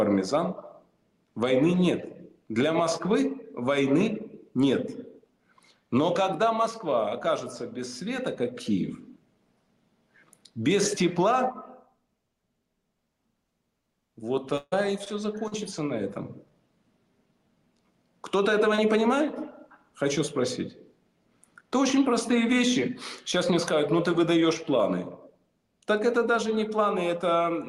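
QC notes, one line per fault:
14.57–14.74 s, burst of packet loss: about 140 ms lost; the last sound is stretched and fades, then about 20 ms of silence. Spectrogram shows smeared, decaying bands and a blank strip.
15.48–15.54 s and 18.76–18.80 s, short concealed packet loss: 40 ms and 20 ms gaps bridged by continuing the prior sound, heard as brief smears.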